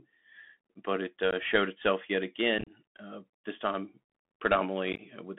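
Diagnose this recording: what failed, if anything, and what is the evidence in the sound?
Bluetooth CVSD headset codec, throughout the speech: a codec-stage fault. The audio is confined to roughly 200 Hz to 3.5 kHz, s sounds are scratchy and a granular hiss sits underneath, from one-bit adaptive delta modulation, which fits a 64 kbit/s CVSD link.

Unconcealed Bluetooth headset packet loss on the radio link at 1.31–1.33 s (15 ms), 2.58–2.71 s (52.5 ms scattered over 90 ms, longest gap 30 ms) and 4.93–5.00 s (45 ms over 60 ms). Lost packets leave abrupt holes, and the scattered losses make the speech sound chopped.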